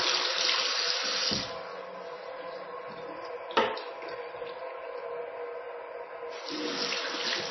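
MP3 compression runs throughout, from start to finish. Nothing survives above 5.9 kHz, so the whole recording sounds dull and boxed in, and the damage is heavy: a watery, swirling texture rides on the sound as weak frequency components drop in and out between frames. The likely cause is an MP3 encode at a very low bitrate, around 24 kbps, where the encoder cut off the treble and discarded detail it judged unimportant.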